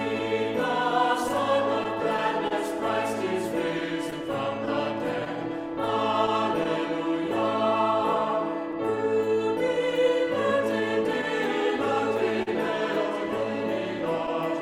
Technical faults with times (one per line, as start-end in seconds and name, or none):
0.00-14.62 clock drift between sender and receiver
0.19-8.75 scattered short gaps
0.34-10.82 repeated timing corrections
12.42-12.49 short stall from a late packet